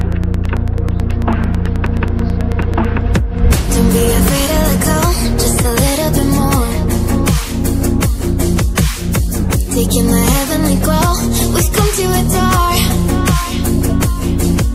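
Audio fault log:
0.01–2.86 s, train of clicks: a steady ticking sits on top of the sound for the first few seconds, with about thirty near-identical pops arriving evenly at roughly 9.2 per second. They poke out around 5 dB above the audio itself. That kind of regular, same-shaped pulse is likely interference from nearby gear or a faulty connection, not anything in the source.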